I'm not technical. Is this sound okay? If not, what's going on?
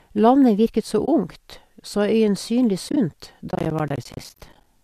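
No, there are two problems. First, AAC frame loss with muting: bits of sound went missing and were replaced with silence, faded in and out. Right after "virket så" there's a short soft hole at 1.06 to 1.08 s, and another at 2.89 to 2.97 s, where several tiny dropouts are scattered over that stretch. Second, processor overload crackle from 3.50 to 4.66 s: the computer couldn't keep up, so dozens of tiny chunks of audio, each around a hundredth of a second, dropped to silence, giving a gritty crackling over the sound until it stops. A slight roughness in the speech throughout likely comes from the low-delay AAC compression used on video calls.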